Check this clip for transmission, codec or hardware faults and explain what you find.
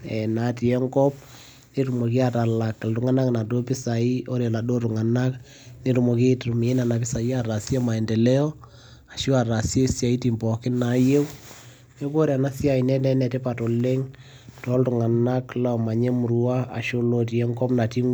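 Nothing faulty turns up anywhere in this speech recording.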